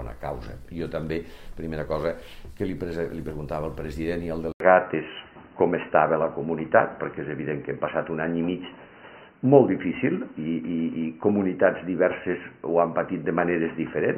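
At 4.52 s the sound drops out for about 80 ms. When it returns, it is dull and boxy, with nothing above 3 kHz. The level shifts by a few decibels, and a new, faint background noise sits well below the signal. This lasts to the end of the clip. The likely cause is an input switched to a poorer device, a narrower-band microphone or headset path taking over mid-recording.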